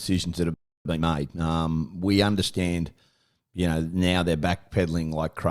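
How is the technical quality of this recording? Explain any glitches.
The recording has two linked glitches near the start of the speech: a dropout followed by a stretch of hurried delivery.

Just after "that have", at 0.54 s, the speech cuts out completely until 0.85 s, a gap of about 0.31 s. This is a playback stall, most likely because the player's buffer ran dry or its audio thread was held up, so nothing reached the output. On a waveform it appears as a flat line splitting the speech mid-flow. A spectrogram shows a clean vertical band of empty space with no energy at any frequency.

From 0.85 s to 1.47 s, ending just before "we understand", the speech runs at about 1.5 times normal speed while keeping its usual pitch. This is time-compressed catch-up. To make up the lost time, the player drops short slices of audio and cross-fades the remaining pieces together. On a spectrogram the harmonics stay at their normal heights, but syllables are packed closer together. 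The waveform shows shortened gaps between words, with occasional small discontinuities at the splice points.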